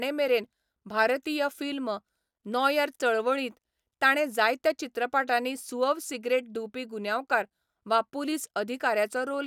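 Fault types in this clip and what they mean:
No faults detected in this speech recording.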